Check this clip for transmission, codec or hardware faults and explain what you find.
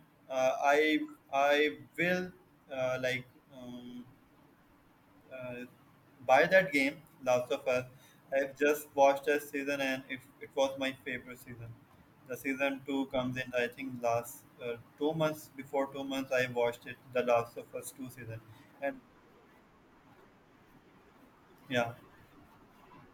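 Two short clicks turn up in the speech, at 16.07 s and 17.58 s. Both are likely dropped samples: a tiny fraction of a millisecond goes missing, so the waveform jumps straight to a later value. Nothing audible is lost, just a sharp tick each time.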